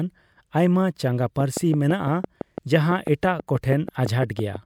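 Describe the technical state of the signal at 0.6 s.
At 0.6 s the speech signal is intact, with no audible technical fault at that moment.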